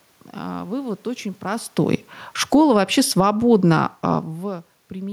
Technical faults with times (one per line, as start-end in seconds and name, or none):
1.78-4.25 automatic gain falling